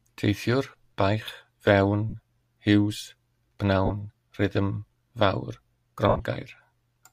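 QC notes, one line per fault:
2.10–2.15 s, 3.85–3.91 s and 6.09–6.20 s, lost LE Audio frames: brief noisy smears where the LC3 decoder repeats the last spectrum with scrambled phase. The gaps run about 38 ms, 45 ms and 83 ms, which fits 7.5 ms frames. The last one is scattered across about 105 ms, with its longest stretch around 70 ms, so the repeated spectrum fades within that stretch.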